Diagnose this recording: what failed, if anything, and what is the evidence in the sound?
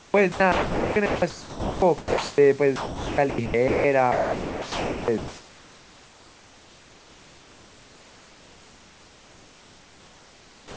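Sound chopped by the voice detector, 0.00 to 2.38 s and again 2.76 to 3.84 s. The speech breaks up, with about 1.74 s of the first stretch and about 0.74 s of the second replaced by a flat synthetic hiss. At the call-processing stage, the sender's voice activity detection is likely switching on and off repeatedly, muting quiet syllables and word edges so that the receiver fills the gaps with comfort noise.

Sound dropped by the voice detector, 4.12 to 5.08 s. Here the speech gives way entirely to steady noise for 0.96 s, and about 0.85 s of actual speech never arrives. This is likely the same detector mistaking low-level speech for background and halting transmission, with the receiver generating comfort noise until speech is detected again. The audio returns once the detector retriggers.

Comfort noise in place of the background, 4.12 s to the end. From this point, about 6.55 s of the room's natural background is swapped for a smooth, featureless noise floor that lacks the texture of the earlier room noise, which sat about 32 dB below the speech. 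This is likely discontinuous transmission in the call path. The sender stops sending during pauses, and the receiver synthesises noise shaped roughly like the background. The whole clip is band-limited with nothing above 8 kHz, which fits the wideband G.722 codec used on this call.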